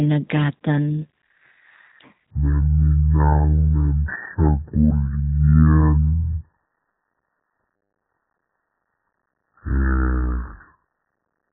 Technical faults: section at the wrong speed

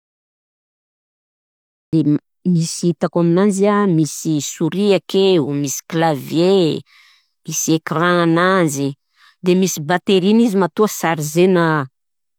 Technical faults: cut-off start

